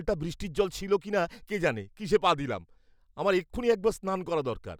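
No technical faults are audible.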